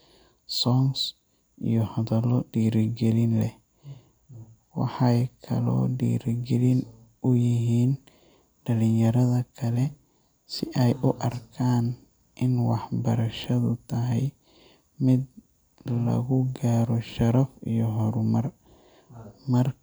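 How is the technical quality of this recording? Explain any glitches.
The recording has no technical glitches to explain: the signal stays continuous and intact throughout, with no dropouts, distortion or other disruptions.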